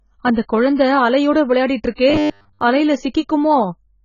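Speech, and it's dull and smeared throughout, likely from heavy AAC compression at a very low bitrate, something like 16 kbps. From 2.10 to 2.61 s it turns into a rigid 100 Hz metallic buzz, likely robotic sound from repeated short buffers, with roughly 10 ms chunks looping while most of the real audio gets skipped.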